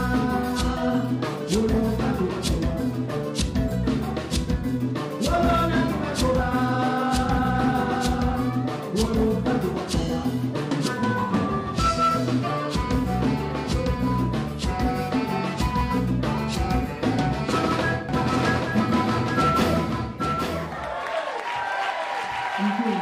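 A second, slower capture path or an edit holding two out-of-step copies is the likely cause of a doubled audio track from 18.09 s to the end. A full-band copy trails roughly 0.7 s behind, about 5 dB quieter, starting abruptly without decay or room colour.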